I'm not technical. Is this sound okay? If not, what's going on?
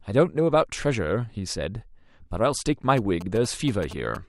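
No. From 2.97 to 4.17 s there are GSM signalling bursts: a nearby mobile phone's radio pulses leak into the audio as a galloping dit-dit-dit of short buzzes, unlike steady hum.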